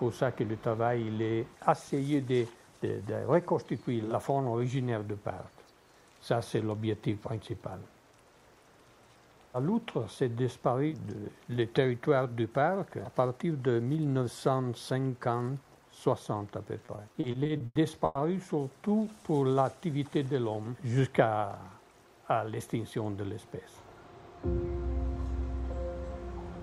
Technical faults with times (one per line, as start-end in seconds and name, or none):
16.85-18.17 repeated stalls (stutter)
19.16-19.60 jitter buffer slow-down
21.77-22.56 jitter buffer speed-up